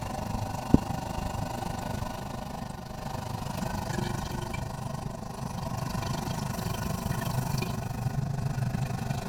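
Frames that were windowed and overlapped back together with a combined gain that does not stay constant cause an overlap-add ripple across the whole recording. The level swells and dips once per frame, roughly thirty times a second, with a depth of about 11 dB. That regular pumping sits on top of everything in the sound, giving it a fast, rough flutter, a tremolo that never lets up.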